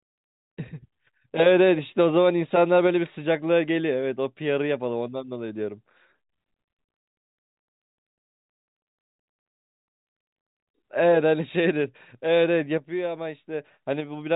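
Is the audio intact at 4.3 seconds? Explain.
Yes, the audio is intact at 4.3 seconds, with nothing breaking up the speech there beyond the narrow G.711 telephone band that stops around 3.8 kHz.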